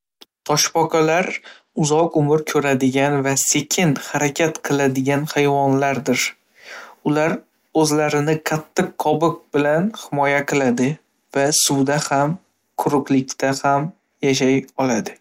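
A speech clip with two Bluetooth SBC bit pool drops, from 1.19 to 2.13 s and from 10.56 to 13.25 s. In both stretches the treble dulls and a gritty noise rises, which fits the link falling from bit pool 31 to 13, near 94 kbps. With too few bits the top sub-bands lose out. On a spectrogram the upper frequencies thin or vanish in those spans, with grainy noise speckling the remaining bands.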